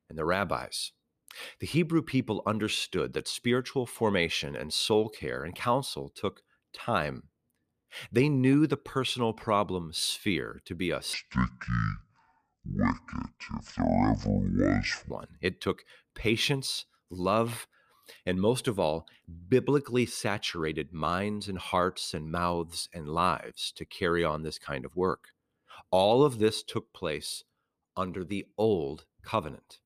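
A section at the wrong speed runs from 11.14 to 15.11 s in this speech clip, just after "sphere to be a". It plays at 0.532 times normal speed, so the sound drops roughly ten semitones and drags, likely from being played against a mismatched clock.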